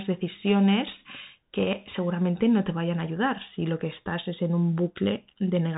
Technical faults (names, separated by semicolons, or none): Bluetooth CVSD headset codec